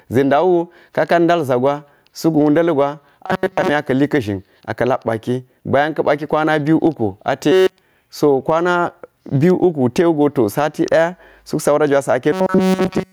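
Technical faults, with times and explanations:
Throughout, gain pumping: the level ducks by roughly 10 dB under loud speech, likely a fast limiter fighting gain set too high.
3.23 to 3.69 s, 7.52 to 7.82 s and 12.32 to 13.13 s, robotic sound from repeated short buffers: speech turns to a rigid metallic buzz at 188 Hz. That's likely a roughly 5 ms chunk looping while the real audio is skipped. The first stretch is partly repeated, the last two entirely.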